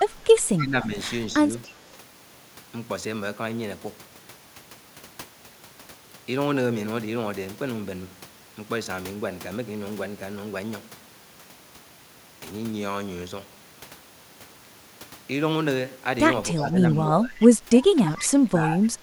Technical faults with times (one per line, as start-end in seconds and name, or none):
0.57-0.91 speech suppressed in double talk
1.66-1.78 echo leak
16.52-17.40 speech suppressed in double talk
17.38-17.47 echo leak
17.92-19.03 speech suppressed in double talk
18.05-18.11 echo leak